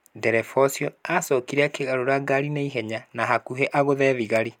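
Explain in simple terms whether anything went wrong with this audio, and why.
Nothing went wrong here; the speech comes through steady and whole, with no glitches, gaps or odd noises at any point.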